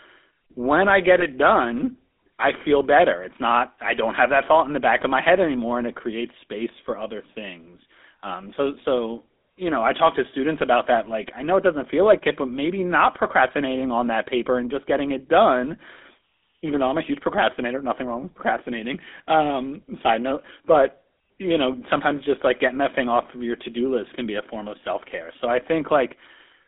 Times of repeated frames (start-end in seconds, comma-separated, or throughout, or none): none